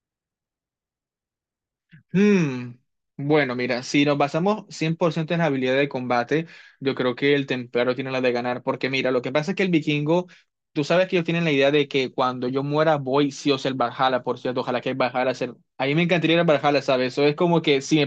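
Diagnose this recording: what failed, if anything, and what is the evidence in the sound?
Listening through the speech in this recording, nothing stood out that would point to a failure at any stage of the chain.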